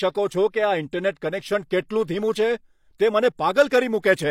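Pre-echo affects this speech clip at 1.15 s, 1.89 s and from 3.68 to 3.71 s. In each case a short hiss runs ahead of a sharp attack, leading it by 19, 15 and 28 ms respectively. The transform codec spreads quantisation noise across each block, so noise scaled for the loud onset also fills the quiet stretch just before it. This leaves those attacks sounding softened and smeared.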